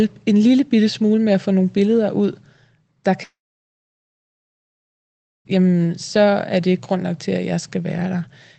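A speech clip in which the audio stream most likely stopped arriving from 3.23 to 5.54 s, a long network dropout. The receiver stretches the last sound into a brief fading buzz, then leaves about 2.1 s of silence before the audio resumes at "så er det grund", with the missing stretch never recovered. The call codec's band limit, audible as nothing above roughly 8 kHz, is consistent with Opus at a low bitrate.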